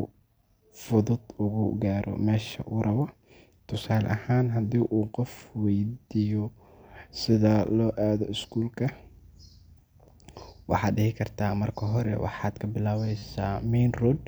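Speech with a repeated buffer fault: at 13.18–13.22 s new audio arrived late, so the device replayed one 10 ms piece four extra times, producing a brief hard-edged buzz.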